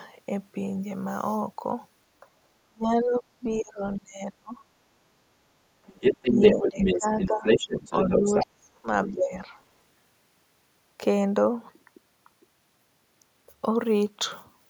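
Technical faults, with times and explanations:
2.21 s, speech suppressed in double talk: a brief dip of roughly 10 dB. With both ends talking at once, the echo canceller likely mistook the near talker for loudspeaker echo and pulled the level down for a moment.
2.67 to 4.60 s, speech suppressed in double talk: the deepest and longest episode. Over about one and a half seconds the talker is cut by up to roughly 35 dB, so stretches drop almost to silence and come back in fragments. The echo canceller likely could not separate this voice from the far-end echo while both were active and attenuated everything, gating the near speech along with the echo.
5.86 to 7.28 s, other side's voice leaking through: a second voice rides over the talker at roughly 5 dB above the main speech. The far end is playing on the loudspeaker and the echo canceller has likely failed to subtract all of it from the microphone signal, so the residue passes through.
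6.31 to 7.59 s, speech suppressed in double talk: while the leakage is present, the near voice dips by up to roughly 10 dB across about 0.7 s in total, as the suppressor likely could not tell the talker from the loudspeaker echo and turned both down.
7.44 to 8.46 s, other side's voice leaking through: the far-end voice returns, now roughly level with the talker, so the two compete on equal terms. The echo canceller has likely failed to remove all of the loudspeaker sound, leaving unremoved echo as loud as the wanted speech.
8.19 to 8.86 s and 9.08 to 9.52 s, speech suppressed in double talk: two further cuts, up to roughly 35 dB and roughly 20 dB, each affecting about 0.4 s in total. The first overlaps the end of the leakage. Both likely come from the canceller reacting to double talk by clamping the near signal hard, which chops the talker into broken pieces.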